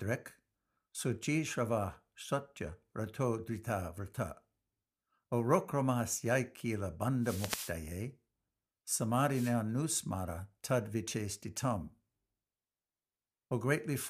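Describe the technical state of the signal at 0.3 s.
At 0.3 s the speech signal is intact, with no audible fault at that point.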